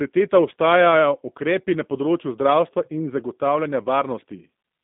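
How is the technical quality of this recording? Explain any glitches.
The quality is limited by plainly audible telephone-style coding across the whole clip. G.729 codec compression runs throughout: the speech is rebuilt from a filter model and sparse pulses, which fits an 8 kbit/s stream, so it sounds rough and synthetic. A spectrogram shows energy confined to roughly 150 Hz to 3.7 kHz.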